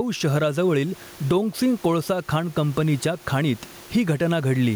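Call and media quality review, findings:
Gain pumping throughout, a gain swing of around 10 dB. Likely mic gain set far too high, with a fast limiter clamping it. Room noise present, about 32 dB below speech.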